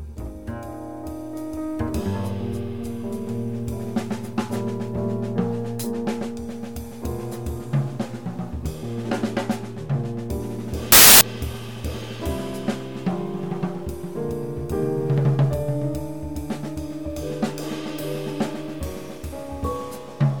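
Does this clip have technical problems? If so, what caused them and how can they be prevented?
Yes. From 10.92 to 11.21 s a sudden burst of very loud white noise starts and stops with hard edges. This is file tags played as audio: an embedded cover picture's compressed data was read as samples. Prevention: have the player skip metadata blocks and decode only audio frames.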